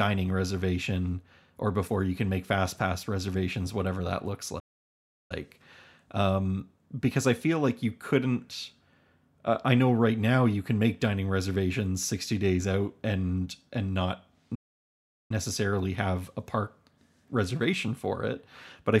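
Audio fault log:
4.59 s and 14.55 s, playback stall: the speech cuts to silence for about 0.71 s, then 0.75 s. The player likely ran short of data.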